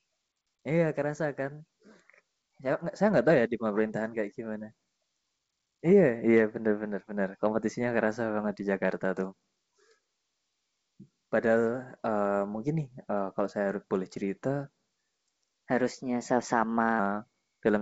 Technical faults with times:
15.33-16.99 section at the wrong speed

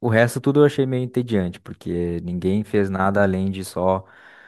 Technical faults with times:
none

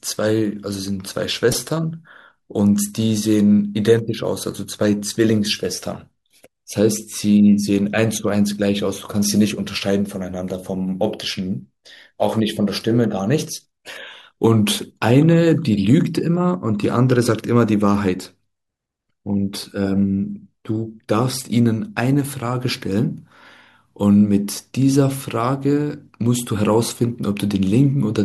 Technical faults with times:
1.52-1.54 DAB burbling

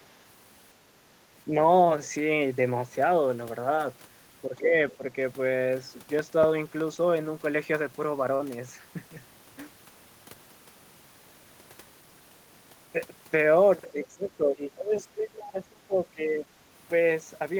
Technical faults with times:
3.75-3.79 short concealed packet loss
4.46-5.04 speech suppressed in double talk
4.90-4.96 other side's voice leaking through
5.82-6.80 CD scratch ticks
6.95-6.99 short concealed packet loss
8.35-8.41 short concealed packet loss
13.91-16.45 speech suppressed in double talk

